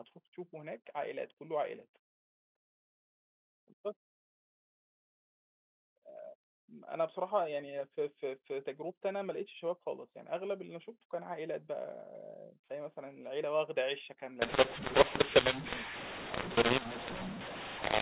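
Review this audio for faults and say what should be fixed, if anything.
From 14.42 s to the end, the speech turns harsh and gritty: a mu-law and A-law mix-up, where G.711 mu-law samples are decoded with the A-law curve. The two logarithmic tables disagree, so some levels come out too loud, others too quiet, and near-silent samples land well above zero, filling pauses with hiss. Unlike clipping, the damage reaches quiet passages too. Unlike normal G.711 quantisation noise, which stays faint beneath the signal, it is coarse and obvious. To prevent it, signal the companding law explicitly and have the decoder use that law rather than a default.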